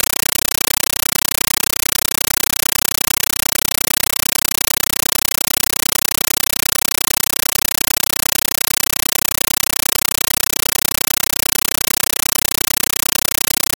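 Compressed stream played as audio, running for the whole speech clip: an AC-3 bitstream, consistent with 448 kbps, is being taken as raw samples rather than decoded, so the speech is replaced by very loud chattering static, 9.33 ms noise bursts repeating 31.25 times a second.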